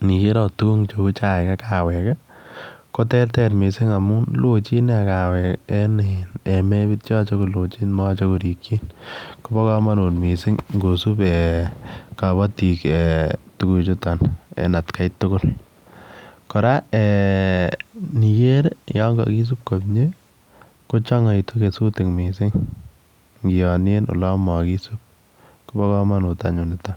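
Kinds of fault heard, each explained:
Call bitrate drop: the encoder was squeezed from 64 to 28 kbps for about 5.5 s around 5.4 to 11.0 s, so speech turns coarse and duller, then clears.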